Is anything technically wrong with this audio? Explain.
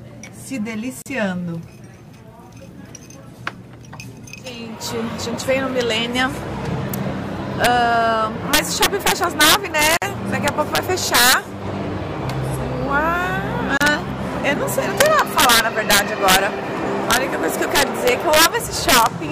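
Yes. Throughout, loud peaks burst into harsh, violent cracks, sharper than clipping. This is integer overflow: the level runs about 7 dB past the limit, and the small fraction of peaks above it wraps to the opposite sign instead of being held.

At 1.02, 9.97 and 13.77 s, the sound drops into brief silences of 39, 49 and 32 ms, then resumes where it stopped. These are gaps at joins of encoded pieces, left because encoder start delay and end padding weren't trimmed.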